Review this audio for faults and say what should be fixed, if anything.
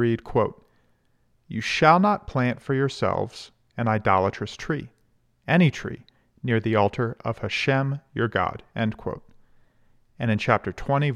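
No faults; nothing needs fixing.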